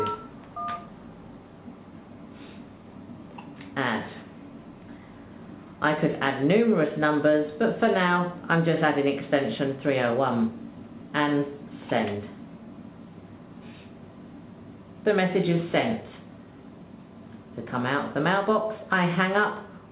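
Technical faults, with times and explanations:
No technical faults are audible.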